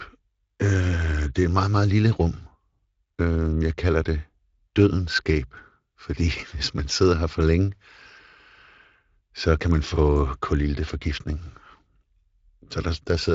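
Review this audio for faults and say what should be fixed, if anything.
Nothing here needs fixing; this is a speech recording carried over Speex at a fairly generous setting, with content reaching up to about 7.6 kHz.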